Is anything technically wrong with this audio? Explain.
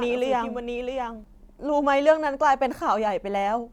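Yes. A doubled audio track is present from the start of the clip to 1.24 s: a second copy of the speech trails the original by roughly 0.7 s, about 5 dB quieter. It is likely a second capture through a slower path, or an edit holding two out-of-step copies. The copy is full-band, with no decay or room colour, so it sounds like a distinct overlapping repeat rather than an echo, and it stops abruptly at 1.24 s.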